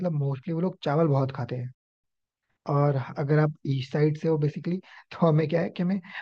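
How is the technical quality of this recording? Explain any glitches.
The speech is interrupted by a playback stall and then hurried through a short catch-up.

From 1.75 to 2.04 s there is a playback stall: the speech halts mid-flow and the output falls silent for about 0.29 s, likely because the player ran short of buffered data or its thread was blocked.

From 2.04 to 2.60 s comes time-compressed catch-up: the player trims its backlog by cutting out tiny slices and cross-fading the joins, so the speech runs at 1.5 times normal speed. The pitch stays put, which separates it from a simple speed-up.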